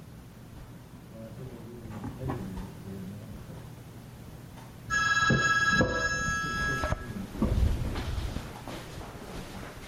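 Gain pumping runs throughout. The background swells between loud sounds and ducks under each one, by around 5 dB. Likely cause: input gain set too high, with a fast limiter clamping down.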